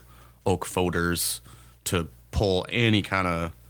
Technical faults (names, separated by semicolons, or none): none